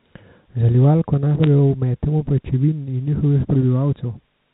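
At 1.44 s a brief burst of bit errors hits the speech, which itself is unchanged. These are bit errors on a digital phone line. A few bits flipped in the G.711 A-law stream, and each flip corrupted one sample.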